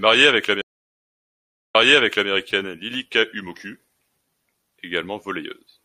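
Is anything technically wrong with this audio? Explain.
Yes. From 0.62 to 2.3 s there is a stream reconnect. The connection broke, the speech falls silent for 1.11 s, and a fresh decoder resumes 0.58 s earlier, replaying speech already heard. That repeat and the faded-in restart distinguish it from a plain dropout.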